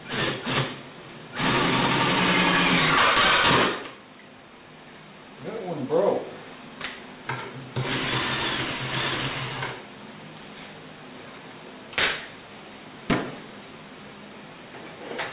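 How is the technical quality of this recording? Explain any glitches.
The technical quality is poor because of aliasing across the whole recording. High frequencies sound gritty and metallic, with harsh, unrelated tones only a few decibels below the wanted sound. The audio appears to have been downsampled to about 8 kHz without an anti-alias filter, so everything above the 4 kHz fold point reflected back down into the band.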